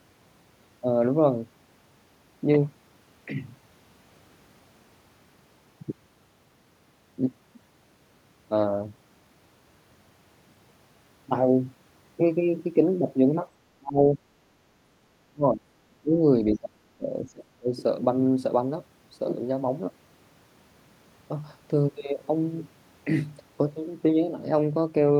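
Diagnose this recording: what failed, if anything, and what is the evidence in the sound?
Speech suppressed in double talk, in the call processing stage. The speech is pulled down by roughly 30 to 35 dB at 13.79–14.22, 15.28–15.66, 15.90–16.20 and 16.58–17.70 s. The likely cause is an echo canceller mistaking the local talker's speech, overlapping the far-end echo, for echo. It ducks the level rather than leaving the clean, abrupt holes of network loss.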